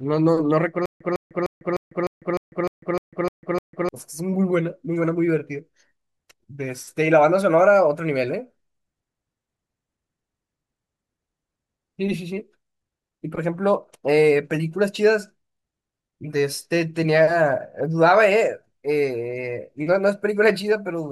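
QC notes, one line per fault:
0.86 to 3.89 s: stutter with silent gaps. A 155 ms burst repeats 10 times. Each repeat is followed by 148 ms of digital silence, giving a 303 ms cycle. A stalled player likely replayed its last fragment at each retry. Speech in that span is lost.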